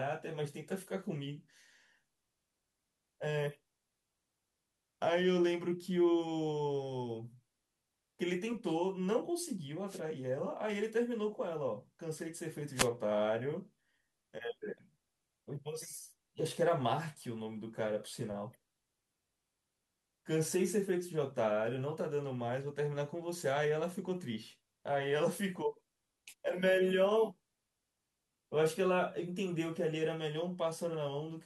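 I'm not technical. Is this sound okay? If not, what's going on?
No. There are two wireless microphone noise hits, at 9.87 to 10.00 seconds and at 12.74 to 12.89 seconds, each lasting only about a tenth of a second or a little more. The microphone sends the voice by radio, and for a moment the signal weakens as reflected radio waves cancel each other out. The receiver's own hiss then rushes in, heard as a brief swish or burst of static over the voice.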